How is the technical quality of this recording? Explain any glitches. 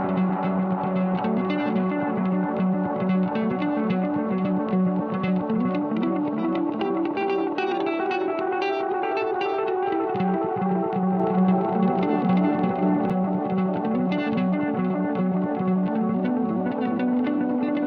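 One glitch stands out in these sounds. From 11.20 s to 13.10 s there is a doubled audio track: a second, roughly equal-level copy trails about 300 ms behind, likely from a slower capture path or misaligned edit. It sounds like a dry, roomless repeat that starts and stops abruptly; waveform and spectrogram show each event duplicated at a fixed offset.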